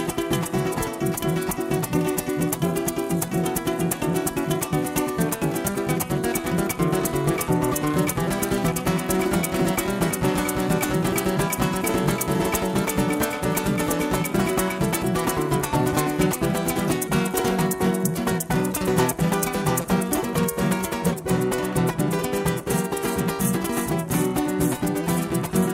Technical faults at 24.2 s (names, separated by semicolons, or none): none